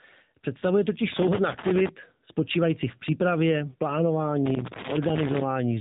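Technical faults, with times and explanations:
Throughout, AMR narrowband mobile codec: the speech sounds thin, boxed-in and clearly processed, with a buzzy, synthetic edge on voiced sounds and nothing at all above about 3.8 kHz, so sibilants lose their hiss and the top end is simply absent. The cause is narrowband mobile coding at a low rate, which fits AMR-NB around 7.4 kbps. It rebuilds the voice from a vocal-tract model excited by a few pulses per subframe, and at so few bits that rebuilding audibly replaces the original detail.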